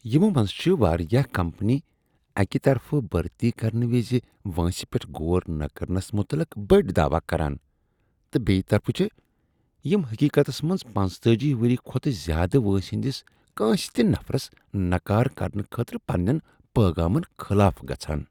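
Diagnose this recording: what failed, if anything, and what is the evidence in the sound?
Nothing failed here as far as the ear can tell: the speech comes across steady and intact, with no break, glitch or distortion anywhere in the recording to trace back to a faulty stage.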